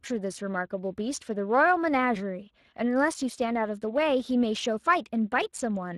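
Speex codec damage runs through the whole speech clip, with plainly audible coding roughness and nothing above 15.5 kHz, which fits a Speex bitrate near 22 kbps. From 0.11 s to 5.89 s, clock slip clicks recur about every 0.1 s, some fifty faint ticks. They likely come from two unsynchronised clocks drifting roughly 200 ppm apart, each slip fitting a single sample dropped or repeated.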